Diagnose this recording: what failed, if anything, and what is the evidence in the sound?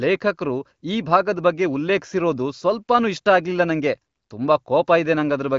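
Nothing stood out on listening to this speech recording, whose audio stops at about 7.4 kHz, as expected from a working AMR wideband (HD Voice) call path at a rate that fits around 18.25 kbit/s.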